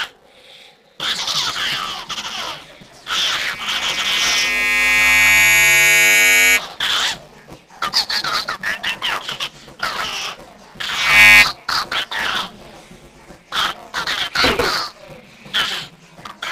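A robotic buzz at 200 Hz runs through the whole audio wherever there is signal. This is buffer tearing: the writer and reader of a ring buffer have slipped, so roughly a fifth of each 5 ms period replays audio from about 10 ms earlier, with hard joins at both edges. A loudspeaker feedback squeal at 2.3 kHz swells from 3.28 to 6.60 s, building over about two seconds to roughly 10 dB above the signal, and returns from 10.88 to 11.46 s, rising within a fraction of a second to about 15 dB above it. Both times, a microphone is picking up the loudspeaker it feeds, and the loop gain exceeds one at that frequency.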